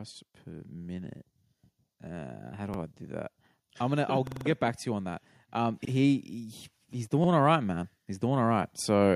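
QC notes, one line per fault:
2.74–2.79 s, 4.27–4.46 s, 5.85–5.90 s, 7.25–7.29 s: repeated buffer. A 46 ms piece of speech plays twice at each point, and five times in a row at 4.27 s, with a hard join at each repeat, so it sounds like a stutter. New audio arrived late, and the length fits a 2048-sample buffer being played again.
3.78–6.32 s, 6.91–9.15 s: automatic gain rising. Speech and background swell together over about 4 dB in the first span, and level rises again through the end of the clip. The gain control judged the input too quiet and raised it gradually.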